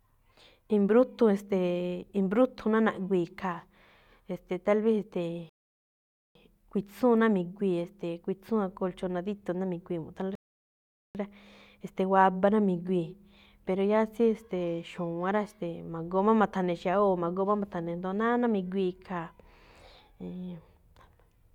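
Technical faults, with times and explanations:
5.49–6.35 s and 10.35–11.15 s, rebuffering stall: the speech just drops into silence for roughly 0.86 s and then 0.8 s, then picks up exactly where it left off, with nothing skipped. That's the player running dry on downloaded audio and pausing until more data turns up. Since no audio is lost, the talking reads as continuous, but those two gaps stretch the timing by a bit over 1.6 s in total.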